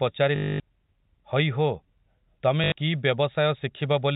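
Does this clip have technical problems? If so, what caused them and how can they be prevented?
Yes. Packet loss with last packet repeated: from 0.36 to 0.60 s and from 2.64 to 2.72 s, the receiver replays the last packet, giving a robotic buzz near 50 Hz, consistent with 20 ms packets. Prevent it with a larger jitter buffer, forward error correction, and proper packet loss concealment. The G.711 telephone band limit below 4 kHz applies throughout.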